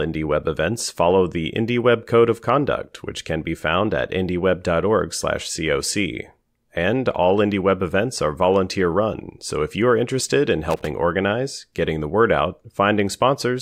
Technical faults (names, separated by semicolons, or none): loose connector crackle